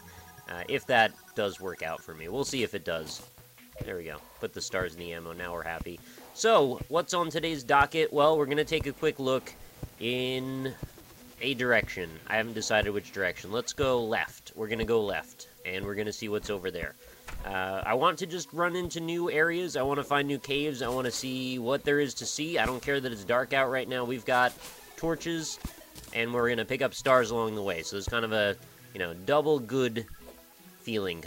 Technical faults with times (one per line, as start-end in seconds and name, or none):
0.00-31.27 low bit depth with noise shaping